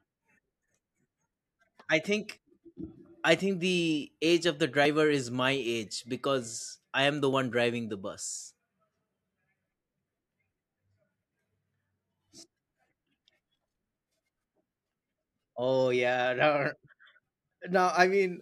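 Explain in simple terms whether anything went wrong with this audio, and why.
The speech skips slightly at 2.38, 4.85, 7.33 and 17.24 seconds, each time losing a tiny sliver of about a fiftieth of a second. That's audio missing between chunks: the recording was likely made in pieces about 2.5 seconds long, with a little lost at each join.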